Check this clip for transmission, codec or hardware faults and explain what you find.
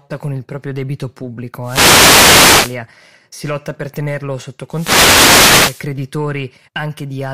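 Two wireless microphone noise hits break into the speech, from 1.61 to 2.79 s and from 4.70 to 5.87 s. Each lasts a little over a second. The radio link from an analogue FM microphone fades as reflected paths cancel, so receiver noise climbs and covers the voice as a swish of static. Unlike a digital dropout, the sound isn't cut to silence: hiss rises and falls over the fade.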